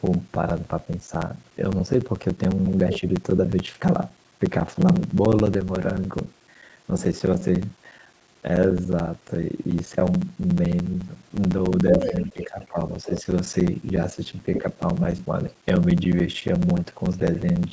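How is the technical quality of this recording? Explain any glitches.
The recording has clear technical problems: a steady buzz and slowed playback throughout, plus bursts of a second voice and dips in the main talker where the two overlap.

Block size mismatch (padded) runs the whole clip. One stage apparently writes shorter blocks than the next reads, which fits 1024-sample blocks, and zero-padding fills each gap. That produces a buzz at 13.9 Hz, and the sound plays at 0.889 times normal speed.

The other side's voice leaks through at 2.94–3.00 s, 11.90–12.68 s, 13.05–13.23 s and 14.55–14.63 s. These are likely loudspeaker echo that the echo canceller failed to remove. The leaked voice is about 10 dB below the talker at first, roughly as loud at 11.9 s, then about 15 dB and 5 dB down.

Speech is suppressed in double talk at 12.34–12.78 s and 13.06–13.26 s, overlapping the leaks. The likely cause is the canceller turning everything down because it could not separate the talker from the echo. 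The talker drops by up to about 10 dB, then about 5 dB.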